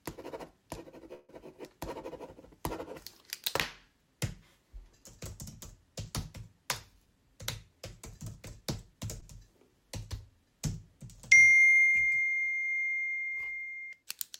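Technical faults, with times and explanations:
1.13 to 1.31 s, call audio freeze: the sound stops moving forward for about 150 ms and the last bit of it carries on as a fading buzz, never dropping to silence. When things pick up again they resume right where they left off, so nothing's lost, just a gap pushed in and the delay grown by that much. That's likely packets held up in transit leaving the jitter buffer empty, with the receiver papering over the wait.
7.05 to 9.06 s, jitter buffer speed-up: across these two seconds the audio runs about 6% fast while the pitch stays put, so it feels a touch hurried. The receiver had more audio queued than it wanted, and it's been trimming out tiny slices a pitch period or so long, over and over, roughly 150 ms in total, to bring the delay back down.
9.2 s, short stall from a late packet: just after the speed-up there's a quick hold of about 17 ms where the sound hangs on a moment too long, with a faint buzzy dip. 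One packet wasn't there on time, so the receiver stretched what it had until it showed up, then carried on from the same spot with nothing missing.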